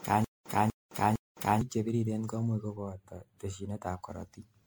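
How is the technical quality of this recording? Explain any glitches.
The recording has several clear technical problems: a repeating dropout at the start, a phasey stretch later on, and coding damage running through the whole speech clip.

Generation loss runs throughout. The speech sounds swirly, smeared and hollow, with blurred consonant attacks, more than a single encode would cause. This is likely from about ten passes through a lossy MP3 encoder at around 96 kbit/s, each adding fresh quantisation damage. On a spectrogram, shimmering holes and patchy texture appear below a cutoff near 19.9 kHz.

A stutter with silent gaps is already under way at the start and runs until 1.61 s. A 244 ms burst repeats three times, each followed by about 212 ms of digital silence, giving a 456 ms cycle. The cause is likely a stalled stream replaying its last fragment. On the waveform, identical blocks alternate with flat silent stretches.

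Channel delay causing comb filtering appears from 2.76 s to 3.87 s. One channel lags by about a tenth of a millisecond, around four samples, and summing to mono cancels shared content at evenly spaced frequencies. The speech turns thin and phasey, and a spectrogram shows fixed dark notch bands starting near 5 kHz.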